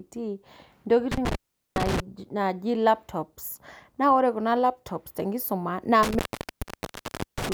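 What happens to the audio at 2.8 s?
Nothing goes wrong at 2.8 s; the speech continues intact through that moment with no audible fault.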